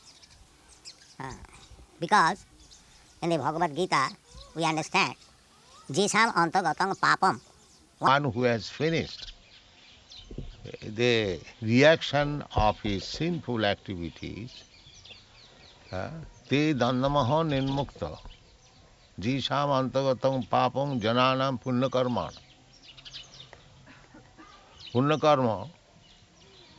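From the start to 8.08 s the audio plays too fast and too high, a wrong sample rate fault. Material captured at 16 kHz is being clocked out at 24 kHz without conversion, so everything runs 1.5 times faster and sits about seven semitones higher.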